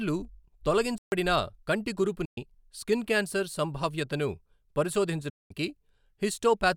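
At 0.98 s the player was likely starved of data or blocked, a playback stall: the speech stops dead for about 140 ms, until 1.12 s, then picks up again after the gap. From 2.25 to 2.38 s, packets likely failed to reach the headphones in time, a Bluetooth dropout. About 116 ms of speech is missing, which points to several lost packets. The hole has abrupt edges or a fade of a few milliseconds, and the speech resumes further along as if it had kept playing. A second, longer Bluetooth dropout, likely from the same late-packet loss, opens at 5.30 s and lasts about 203 ms, to 5.51 s. It cuts out and comes back further along in the same way.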